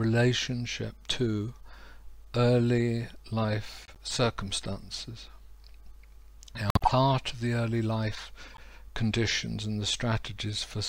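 At 3.85 to 3.98 s, 6.69 to 6.92 s and 8.49 to 8.60 s, a corrupt frame was decoded: damaged compressed data was played as if valid, so misread gains and codes throw energy into the wrong frequencies. Each is a short chirpy burst of noise, quiet near about -35 and -30 dBFS, but harsh at about -10 dBFS in the middle one. Unlike a dropout or concealed loss, nothing repeats; foreign sound is added.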